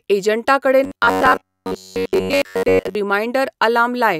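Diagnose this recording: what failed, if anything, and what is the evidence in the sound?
Robotic sound from repeated short buffers, 0.84 to 2.95 s: speech becomes a rigid 93.8 Hz buzz, likely a driver-buffer underrun looping a 10.7 ms chunk.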